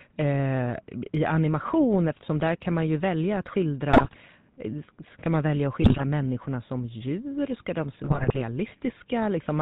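The whole clip carries the GSM full-rate codec sound, plainly audible. The speech has been squeezed through a low-rate vocal-tract model driven by sparse pulses. Nothing survives above 4 kHz. The result is a buzzy, gravelly roughness throughout.

GSM bit errors break in three times: 3.90 to 4.17 s, 5.82 to 6.01 s, and 8.04 to 8.42 s. Corrupted bits reach the decoder and scramble its filter, pitch and gain values. The speech collapses into squawks, pops and gargling.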